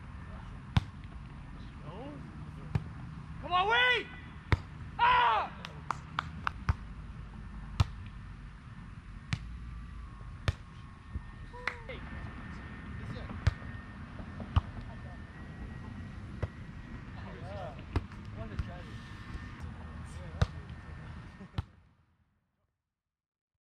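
Between 15.33 and 17.03 s the audio suddenly runs about 5.5% fast and sits roughly 93 cents sharp, close to a semitone, then snaps back to normal. That's the signature of a drift correction step, likely clock-matching software jumping the playback rate to rebalance its buffer, while the smooth fade-out from around 21.5 s is just the intended ending.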